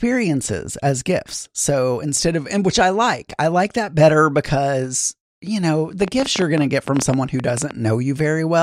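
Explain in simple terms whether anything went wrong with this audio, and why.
From 6.02 to 7.72 s there's a train of clicks, around twenty uneven ticks, about 12 a second, over the speech, likely from electrical interference or a faulty connection.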